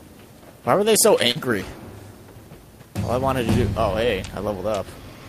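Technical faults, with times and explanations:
1.31–1.38 s, short concealed packet loss: about 40 ms of the stream failed to reach the decoder in time. The receiver bridged the gap with roughly 37 ms of synthesized audio, extending the preceding sound either from its pitch period or as spectrally shaped noise, then cross-faded back into the received signal. Because the fill imitates rather than reproduces the lost material, that brief stretch is heard as a smear or wobble.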